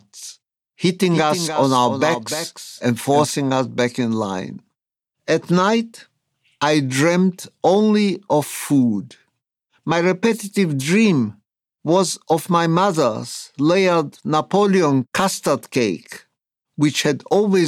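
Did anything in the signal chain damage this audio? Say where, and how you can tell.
Yes: a doubled audio track from 1.11 to 3.31 s. A dry, full-band copy of the speech trails around 300 ms behind, about 10 dB quieter, starting and stopping abruptly. This is likely a slower second capture path mixed in at the driver or buffer stage.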